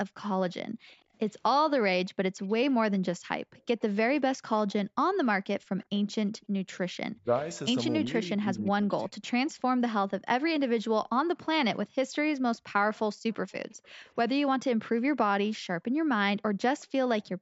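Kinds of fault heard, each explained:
Echo leak: One side's echo canceller likely missed some loudspeaker pickup, so a faint copy of the speech returns about 0.37 s late in two long stretches.
Background gated by the echo canceller: The canceller clamped the microphone while its loudspeaker played, so the room sound briefly drops by up to about 40 dB, then returns.
Speech suppressed in double talk: Both sides talked at once and the canceller likely took the talker for echo, so speech dips deeply, in pieces, between 7.1 and 9.2 s.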